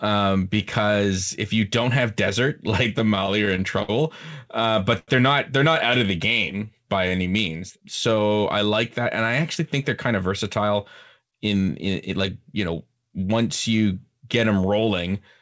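From 2.84 to 3.90 s the speech shows repeated stalls (stutter): the jitter buffer ran dry eight times, and each time the last sound was held, about 122 ms in all, the longest hold 58 ms. Nothing is lost, but the speech catches and drags in quick succession. A single late packet would give only one hold.

At 4.99 s comes a short stall from a late packet. One sound is stretched for 87 ms, with a faint buzz or dip, until the packet arrives and playback resumes where it stopped. The delay stays 87 ms higher afterwards.

Between 6.06 and 8.27 s, after "they're not out of" and before "I like that and", a jitter buffer slow-down repeats pitch periods to add 172 ms. The speech runs at 93% speed with unchanged pitch, sounding drawn out rather than stopping outright.

Jitter buffer speed-up follows three times. From 10.13 to 10.76 s, after "I actually think they're", speed rises to 108%, trimming about 50 ms. 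From 11.19 to 12.29 s it runs at 109%, trimming about 100 ms. From 12.73 to 13.33 s, just before "you get", it reaches 112%, trimming about 70 ms. Pitch holds steady while the speech sounds hurried, which tells it apart from a pitch-shifting speed change. Throughout, the audio stops at 8 kHz, which fits a wideband call codec such as G.722.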